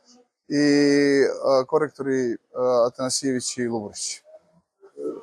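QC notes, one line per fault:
No audible faults found in this clip.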